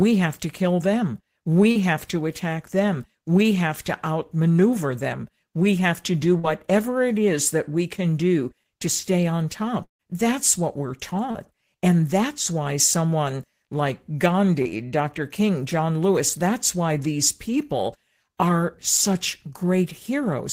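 A speech recording with two kinds of network fault. Short concealed packet loss occurs at 1.71 s (between "have to kill them" and "have to attack them"), 6.39 s (after "have to do"), 11.31 s and 14.62 s. Each time about 40 ms of audio was lost and the decoder filled roughly 30 to 42 ms by extending the preceding sound. The result is a brief smear or wobble, visible on a spectrogram as a short stretch of repeated, smoothed harmonics. At 9.83 to 10.02 s, just after "do to stay on", the sound carries on as a fading buzz or hiss and then drops to near silence before resuming with about 160 ms missing. This is likely a long network dropout. The waveform shows a decaying tail followed by a flat gap of about 110 ms.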